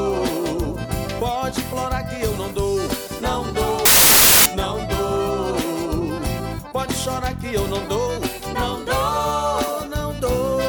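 From 3.85 s to 4.46 s, roughly 0.6 s, the audio gives way to a burst of loud, harsh broadband noise. This is a case of samples built from the wrong bytes: the reader misassembled each sample's bytes, through a one-byte offset, reversed byte order or a mismatched alignment, so the rapidly fluctuating low-order bits ended up carrying most of each value.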